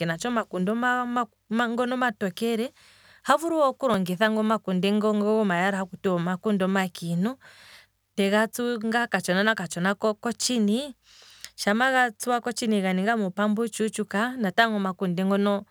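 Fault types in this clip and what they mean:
Repeated buffer at 3.94 s: fresh audio failed to reach the playback device in time, so it replayed the block it already held, twice more, giving three back-to-back copies. Each copy lasts only about 1.33 ms, which fits a 64-sample buffer. Replays that short never form an audible stutter. Instead they fuse into a single click or tiny buzz in the speech, with hard joins at each repeat. Essentially no audio is lost.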